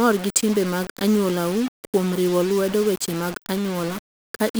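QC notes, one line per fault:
Throughout, low bit depth without dither: the speech carries a grainy, rasping distortion whose texture shifts with each syllable. Quiet tails crumble into grit. The error sits only around 15 dB below the signal, which fits rounding to about 5 bits, likely with no dither applied. Dithered requantisation would leave a steady hiss that continues through the gaps. Here the grit follows the speech.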